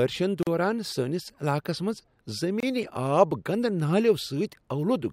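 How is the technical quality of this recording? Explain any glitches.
The speech is interrupted twice by gaps at joins of encoded pieces, at 0.43 to 0.47 s (about 40 ms) and 2.60 to 2.63 s (about 25 ms). Separately encoded segments were spliced without trimming encoder delay and end padding, so brief silences with smeared edges cut in before the sound resumes.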